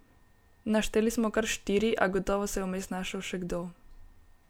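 A speech clip with no audible technical faults.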